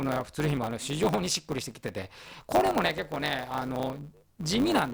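It's a speech clip with a block size mismatch (truncated) running the whole way through. There's a steady buzz at 100 Hz, and the talking moves about 1.07 times faster than it should. The likely cause is one stage writing longer blocks than the next one reads, so each block's tail gets dropped. The buzz rate fits 512-sample blocks being written, with a slice lopped off every time.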